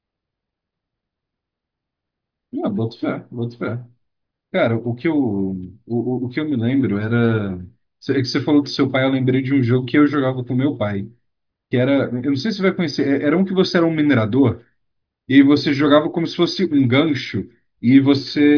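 No technical fault can be heard anywhere in the speech. Nothing in the audio calls for a timed note or a measured value.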